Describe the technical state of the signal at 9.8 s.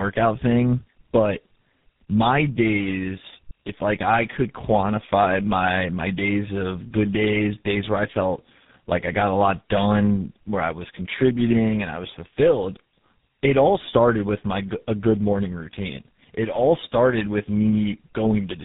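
At 9.8 s the speech carries tandem speech coding, present throughout: re-encoding through roughly three successive low-rate codecs compounds into rough, muffled, warbly speech with nothing above 3.8 kHz.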